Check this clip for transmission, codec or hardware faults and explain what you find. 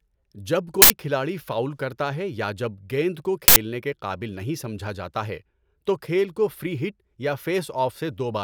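There is one recurring fault: an uninitialised buffer, heard twice. At 0.82 to 0.90 s, just before "کھلاڑی فاؤل کرتا ہے", and at 3.48 to 3.56 s, between "یا جب گیند کو" and "کے قابل نہیں سمجھا", an 80 ms block of stale memory plays as a loud burst of digital noise. It shows as a rectangular slab on the waveform and a broadband vertical band on the spectrogram.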